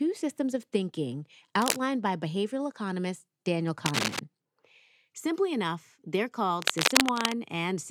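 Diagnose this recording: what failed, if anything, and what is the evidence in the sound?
Analogue wiring, with cable scratch noise the likely cause: dense, ragged bursts roughly as loud as the speech at 1.62–1.77 s (between "systems of thinking" and "by behavioral economist"), 3.86–4.19 s, and 6.61–7.36 s after "enough they're". A shifting contact's resistance fluctuates rapidly, injecting scratchy noise.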